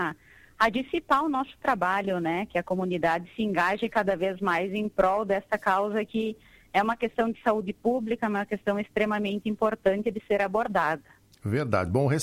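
Nothing here calls for comment, since the audio runs its whole course without a single technical fault turning up along the way.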